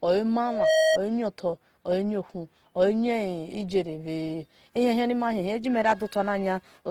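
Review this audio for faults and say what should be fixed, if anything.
A loudspeaker feedback squeal runs from 0.45 to 0.99 s: a single 634 Hz tone that builds over roughly a third of a second until it sits about 5 dB above the speech. A microphone picked up the loudspeaker it was feeding, and at 634 Hz the loop's gain exceeded one, so that frequency kept reinforcing itself. On a spectrogram it appears as one bright horizontal line at 634 Hz, and the waveform shows a swelling sinusoidal envelope riding over the speech. To prevent it, reduce monitor gain, move the microphone away from the loudspeaker, or notch 634 Hz in the feedback path.

Throughout the clip, the speech sounds grainy and rough, with plainly audible codec damage, though the bandwidth stays full and extends to about 20.2 kHz. The likely cause is Opus compression in its music (CELT) mode at a low bitrate, one that fits roughly 16 kbps. 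With too few bits, the encoder keeps each band's energy but fills the detail by folding lower bands or with noise. On a spectrogram the upper bands appear as smeared, noise-like texture rather than clean harmonics. To prevent it, encode at a higher bitrate or use the speech mode.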